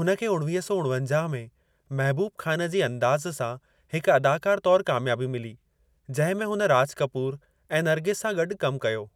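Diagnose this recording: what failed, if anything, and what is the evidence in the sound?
Nothing in the recording points to a failure at any stage of the chain. The speech carries no event or disturbance that calls for a diagnosis.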